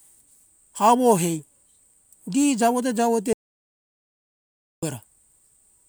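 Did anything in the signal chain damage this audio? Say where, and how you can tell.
Yes. The speech cuts off abruptly at 3.33 s and returns at 4.83 s, leaving about 1.5 s of silence with no room tone or noise floor underneath. That points to an audio dropout to silence, likely at the input or link stage, from a disconnected device, a failed connection or a brief mute. The recorder kept writing silence, so whatever was spoken in that span is unrecoverable.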